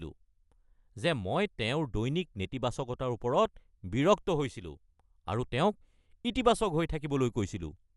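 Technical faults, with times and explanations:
Throughout, Dolby Digital compression: the encoder was most likely starved of bits, which fits an AC-3 stream near 64 kbps, so it cut the band and left many frequency lines without mantissa bits, letting the decoder fill them with dither noise. Nothing reaches above 11.5 kHz, so the speech sounds dull and muffled. The codec damage is plainly audible as a rough, fluttering noise clinging around voiced tones.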